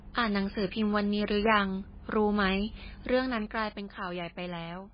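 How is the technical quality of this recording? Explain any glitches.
The recording is technically poor throughout, with heavy damage of one kind. For the whole clip, the speech sounds watery and swirly and nothing reaches above 5 kHz, which points to likely MP3 compression at a very low bitrate, around 18 kbps. Starved of bits, the encoder drops weak frequency lines that flicker on and off between frames and cuts the treble at a fixed point. The flickering artefacts set it apart from a simple low-pass filter.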